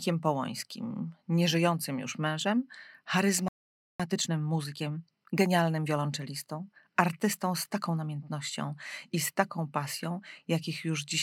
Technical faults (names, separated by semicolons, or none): playback stall; time-compressed catch-up